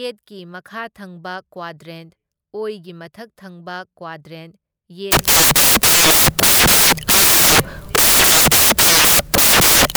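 Speech plays cleanly until 5.12 s, when it collapses into loud, broadband hiss that runs through to the end of the clip. This is samples built from the wrong bytes: from that point the reader assembles each sample from misaligned or swapped bytes, so the rapidly varying low-order bits land in the high-order position and dominate every value. The result sounds close to white noise on the louder passages. On a spectrogram the region after 5.12 s fills with flat energy across all frequencies, while the waveform jumps to a dense block with no envelope of syllables.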